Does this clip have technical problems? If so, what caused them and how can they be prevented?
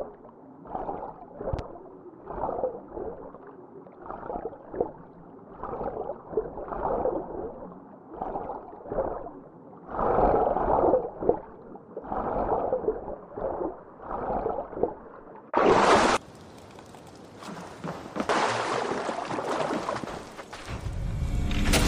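Yes. A loud pop occurs twice, at 1.53–1.61 s and 20.04–20.30 s, each a double pop, roughly 10 dB and 5 dB above the signal. The sound continues underneath. These are likely voltage transients from a plug, switch or static. Prevent them by muting inputs before connecting or switching equipment.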